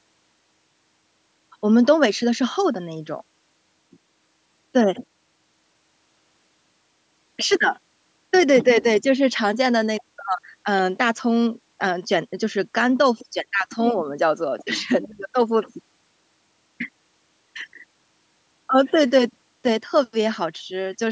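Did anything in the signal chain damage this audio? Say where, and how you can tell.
No, the signal chain left this speech undamaged.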